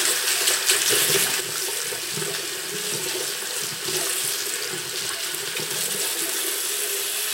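At 1.41 s the level most likely drops because a digital gain setting was applied in a single step rather than ramped in, producing a sudden gain jump of about -7 dB. From that instant to the end of the clip, everything sits noticeably lower: the sound and its background noise fall together, at once, with no fade. The abrupt change makes the second part feel as if someone yanked a fader down mid-stream.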